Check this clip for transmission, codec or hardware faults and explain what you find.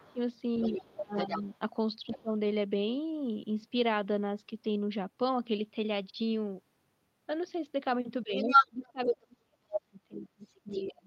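Two echo-related faults appear, both clustered at the start and the end of the speech.

Other side's voice leaking through: from 0.0 to 2.22 s, a second voice sits somewhat below the main talker. It returns from 8.35 to 9.15 s, clearly louder than the talker, then briefly at 9.73 s and faintly from 10.45 to 10.84 s. The likely cause is loudspeaker playback reaching the microphone, with the echo canceller leaving part of it in.

Speech suppressed in double talk: the talker's level sinks by roughly 20 dB from 0.02 to 0.2 s and from 0.73 to 1.5 s, and somewhat less from 2.13 to 2.3 s. From 8.23 s to the end it drops much deeper, around 35 dB. This is likely the canceller clamping down on everything while both sides talk at once.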